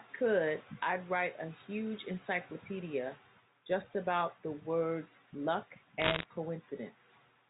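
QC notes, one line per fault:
6.00–6.26 s, bit errors on a digital phone line: a short burst of crackle, sharp ticks scattered over the speech for about a quarter of a second. Roughly one bit in a hundred is flipped, and each hit on a sign or high-order bit knocks a single sample far off, producing a click. The band limit below 4 kHz of the telephone coding underneath is audible as expected.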